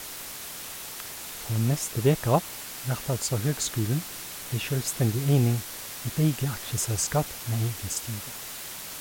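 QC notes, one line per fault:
Throughout: low bit depth with dither. The speech has been reduced to a very short word length, with dither added before each sample was rounded, so the rounding error is spread into random noise instead of tracking the signal. The result is a steady, even white hiss sitting only around 10 dB below the speech, with no grainy or crunchy distortion on the speech itself. A hiss this loud fits a word length of only about 5 bits.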